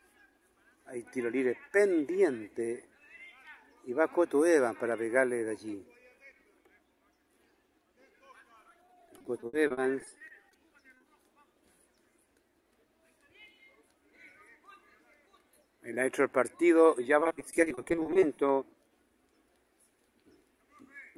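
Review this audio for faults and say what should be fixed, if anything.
From 8.69 to 10.55 s and again from 17.20 to 18.39 s there's repeated packet loss (robotic sound): a couple dozen short dropouts, each patched by stretching the previous sound, concealing about 23% then 32% of those spans, hence the choppy texture. A steadier network path or a larger jitter buffer should cut these down.

Right after, at 10.94, 10.97 and 11.01 s, there's short concealed packet loss, three back-to-back holes of 20 to 30 ms. The receiver bridges each by continuing the last sound and blending back, which comes across as a quick smear or wobble. Adding forward error correction or redundancy on the link would help recover these.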